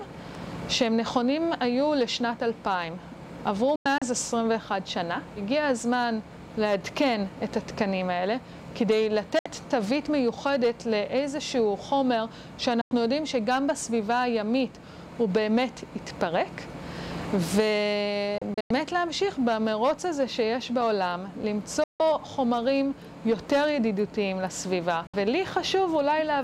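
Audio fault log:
3.76–4.02, 9.39–9.46, 12.81–12.92, 18.38–18.71, 21.84–22.00, 25.07–25.14 s: digital broadcast dropout. The receiver mutes on bad frames, with a 3 ms fade. Holes last 32 to 160 ms, fitting 32 ms frames. At 3.76 and 18.38 s they scatter into separate short gaps. The missing audio is gone.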